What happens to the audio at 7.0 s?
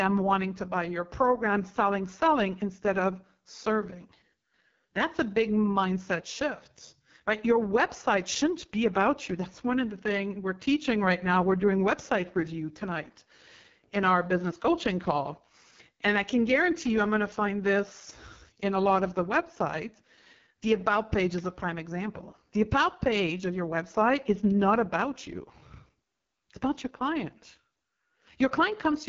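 AMR wideband (HD Voice) codec damage runs through 7.0 s and the whole clip. The low-rate pulse model leaves the speech rough and raspy, with nothing above 7.1 kHz, which fits the 6.6 kbit/s mode.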